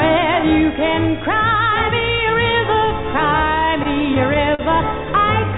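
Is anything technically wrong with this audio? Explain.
Yes. Between 3.66 and 4.61 s there are repeated stalls (stutter): packets arrived too slowly, so the jitter buffer ran dry five times, and the receiver stretched the last sound to cover about 88 ms, the longest hold 40 ms. Unlike dropouts, nothing is lost; the audio drags and stutters. The band-limited G.711 call sound, empty above 4 kHz, is the normal path.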